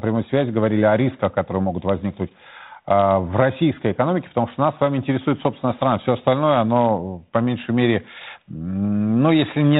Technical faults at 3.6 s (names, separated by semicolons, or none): none